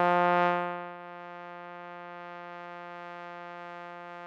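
No technical faults can be heard in this music clip.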